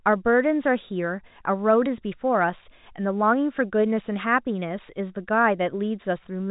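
No technical faults can be heard in this speech.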